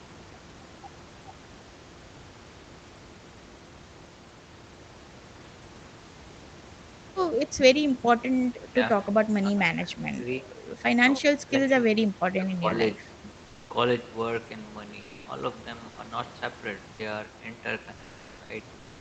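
From 8.71 to 13.26 s, at 8.71, 9.4–10.54, 11.04–11.69, 11.87–12.77 and 12.96–13.26 s, speech is suppressed in double talk: the speech drops by up to about 40 dB, likely because the echo canceller mistook it for loudspeaker echo. Unlike packet loss, the gaps track the overlapping talk. At 13.45–13.69 and 15.01–15.25 s, comfort noise replaces the background for 240 ms each. The real room noise turns smooth and featureless at nearly the same level, which distinguishes it from a dropout.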